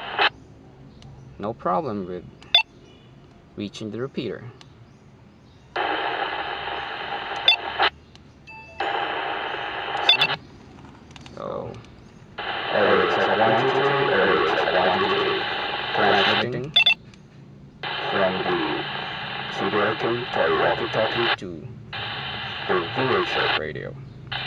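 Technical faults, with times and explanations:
10.2 to 17.0 s, doubled audio track: a second, full-band copy of the sound runs roughly a tenth of a second behind the original at about the same loudness, giving a hard slapback with no decay or room colour. It most likely comes from a second capture path or an edit holding two copies out of step. The waveform shows each transient repeated about 100 ms later, and the spectrogram shows every onset smeared into twin vertical edges, starting and stopping abruptly.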